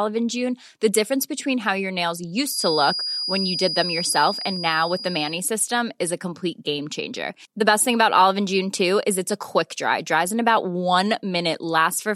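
Right after "between how your nails", at about 2.43 s, a thin, steady whistle at about 4.9 kHz creeps in behind the speech and hangs there until about 5.44 s, just before "system is a complete". That's a feedback whistle: the likely cause is the loudspeaker-to-microphone loop sitting right on the edge of feedback, so one tone keeps ringing without taking off. It stays a little below the speech level and swells and fades slowly as it goes.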